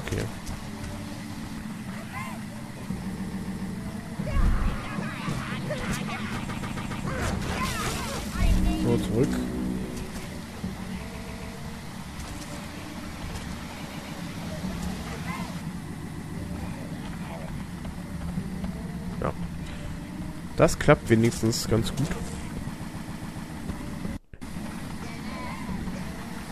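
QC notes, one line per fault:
3.16–3.72 s, 6.48–7.04 s, 11.12–11.54 s, 15.93–16.35 s, 22.80–23.50 s: repeated frames. A 139.3 ms block plays again and again, four extra times in the first two runs, three in the next two, five in the last. This fits six compressed frames being sent more than once. Each repeat jumps back to the block's start, so it is heard as a stutter. The stutters add 0.42 to 0.70 s each, lengthening the audio.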